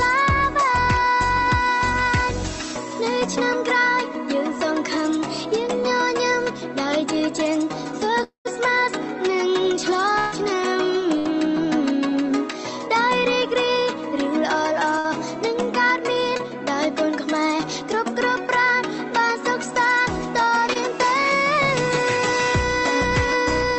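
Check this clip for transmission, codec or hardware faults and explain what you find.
You've got a cluster of network-loss faults from about 8 s onward in this one, all riding on a call path whose top end stops at about 8 kHz, which is what a call codec's bandwidth limit sounds like.

First up is the biggest gap, at 8.23 to 8.47 s. The last sound gets stretched into a fading buzz or hiss, drops to silence for roughly a tenth of a second, and then the audio picks up further along with about 0.22 s gone. That's most likely a long network dropout: nothing arrived for a while, so the receiver extended what it had until there was nothing left to extend.

Then there are three bursts of packet loss, at 10.19 to 10.34 s, 11.19 to 11.27 s and 14.99 to 15.08 s. The first is the longest, with about 140 ms missing, and the other two lose around 60 ms each. In each case the receiver held the last sound and turned it down through the gap, so you get a short sagging buzz or hiss before the audio jumps ahead with a chunk skipped.

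Last are two short concealed packet losses, at 16.37 to 16.41 s and 20.73 to 20.77 s. Each covers a hole of about 20 ms where the data didn't reach the decoder in time. The decoder papered over it by continuing the previous sound and blending back in. You hear just a quick smear or wobble, and anything very brief in that spot can simply disappear.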